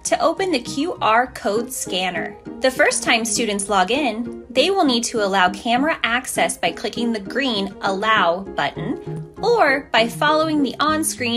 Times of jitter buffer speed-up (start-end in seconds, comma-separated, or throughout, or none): none